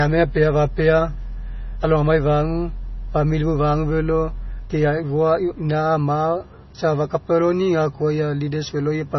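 From start to finish the speech carries heavy MP3 compression damage. Nothing is heard above about 5.9 kHz, so the top end sounds dull and boxed in. The s sounds come through thin and chirpy. Quieter detail swirls and bubbles as weak frequency lines drop in and out between frames. Consonant attacks smear. This points to a very low bitrate, likely around 24 kbps, where the encoder starves the treble first.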